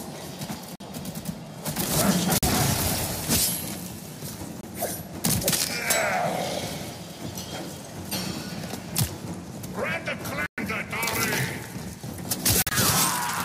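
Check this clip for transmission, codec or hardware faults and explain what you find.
Five short silences come from corrupt frames being muted, at 0.75–0.81, 2.38–2.45, 4.61–4.64, 10.46–10.60 and 12.62–12.73 s. Damaged compressed frames were rejected by the decoder and replaced with silence, giving abrupt holes of about 30 to 140 ms. Unlike a buffer dropout, the timing around each gap stays intact and nothing is smeared or concealed.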